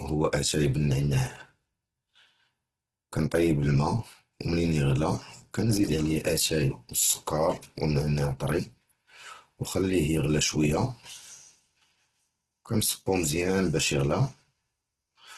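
Throughout the speech the sound is rough and grainy, with tonal parts turned noisy rather than hollow or swirling, and nothing above 12.2 kHz. The likely cause is heavy Opus compression in its music (CELT) mode: with too few bits, the encoder keeps each band's energy but fills the detail with folded copies of lower bands or noise. The damage and the band limit fit a bitrate of around 12 kbps.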